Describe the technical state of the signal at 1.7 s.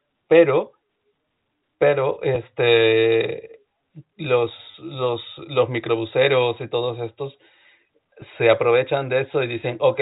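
At 1.7 s the speech is intact, carried through G.711 telephone coding with its 4 kHz ceiling and a faint level-tracking quantisation hiss, and no fault occurs there.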